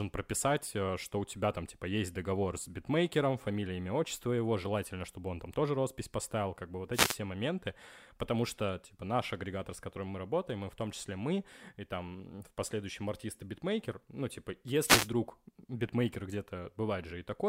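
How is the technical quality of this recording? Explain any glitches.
The speech is interrupted twice by wireless microphone noise hits, at 6.92 to 7.19 s and 14.83 to 15.10 s. Each time, reflected radio paths cancel the FM microphone's signal at the receiver. As its strength sinks, receiver noise rises, giving a quarter-second burst of static.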